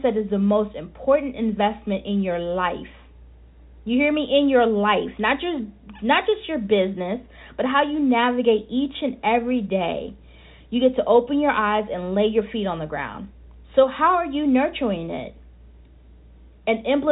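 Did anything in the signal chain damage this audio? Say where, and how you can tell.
No, nothing in the chain has damaged this speech, which carries the usual G.711 telephone coding character (nothing above 4 kHz and at most a faint, level-following quantisation hiss consistent with 64 kbps A-law) without any further disturbance in the signal.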